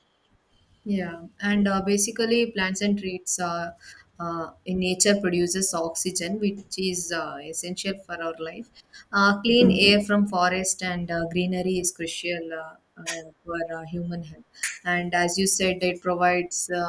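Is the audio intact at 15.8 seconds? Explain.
Yes, at 15.8 seconds the speech plays through cleanly, with no audible fault at that moment.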